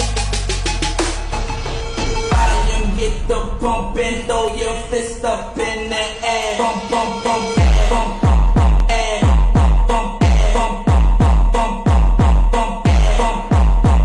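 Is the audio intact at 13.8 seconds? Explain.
Yes, at 13.8 seconds the audio is intact, with no dropout, glitch or other fault to be heard at that moment.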